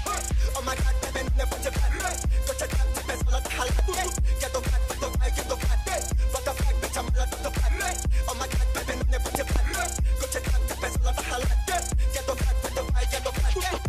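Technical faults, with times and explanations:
3.79–3.99 s and 9.35–9.58 s, loud pop: each is a double pop, about 10 dB and then about 15 dB above the sound, which carries on underneath. It is likely a voltage pulse from a switch, plug or static. On the waveform these are tall spikes, and on the spectrogram thin broadband vertical lines.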